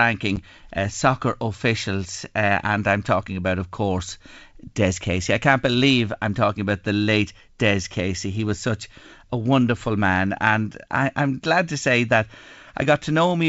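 This is a speech clip carried over a wideband G.722 telephone link, with clear sound up to about 7 kHz. Packet loss on an ADPCM call is heard near the start, from 0.36 to 0.38 s, just before "uh soccer officials". A hard-edged gap of about 10 ms cuts in, which fits one lost packet filled with silence. The decoder's adaptive predictor and step size then drift from the sender's. Speech resumes with brief distortion before it settles.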